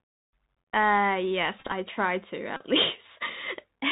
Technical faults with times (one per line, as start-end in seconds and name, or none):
0.00-3.91 Bluetooth CVSD headset codec
1.59-1.72 Bluetooth headset packet repeated
2.56-2.62 Bluetooth headset packet repeated